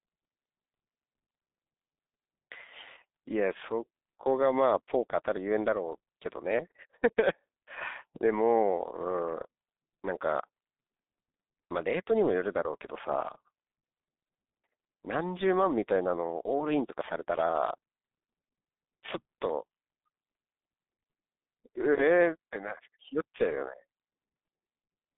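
Speech that sounds muffled and hoarse throughout, with smeared consonants and nothing above about 3.8 kHz. It carries heavy G.723.1 codec damage: the narrow telephone band and coarse 30 ms frames, consistent with a bitrate near 6 kbit/s, blur rapid detail.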